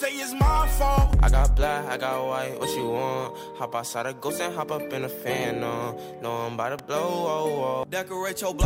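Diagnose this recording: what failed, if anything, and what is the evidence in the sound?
A single sharp snap at 6.79 s marks an electrical switching spike entering at the analogue wiring stage, likely from a nearby switch or motor arcing. The waveform shows one narrow transient peaking around -20 dBFS; a spectrogram shows a thin full-band vertical line.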